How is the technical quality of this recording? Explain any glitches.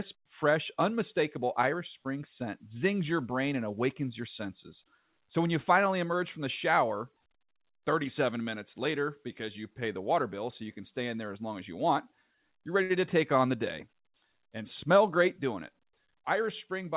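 The recording went through a narrowband call path with no content above 4 kHz, which fits a G.711-type codec, and it has two jitter-buffer glitches.

At 12.83 to 12.93 s, between "as you want you're" and "to take on the", there is a short stall from a late packet. The buffer ran dry, so the receiver stretched the last sound by 64 ms. Nothing is lost, but the sound is audibly held.

From 15.42 to 16.33 s, after "and smell great", there is a jitter buffer speed-up. Repeated pitch-period cuts remove roughly 70 ms, so the speech runs at 106% speed with unchanged pitch and sounds slightly hurried.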